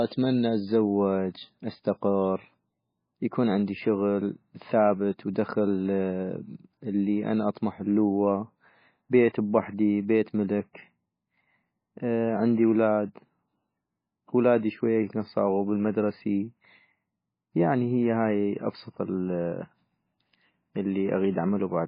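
Throughout, the speech stops dead at 5 kHz and sounds watery and swirly. Likely heavy MP3 compression, fitting a bitrate near 17.5 kbps.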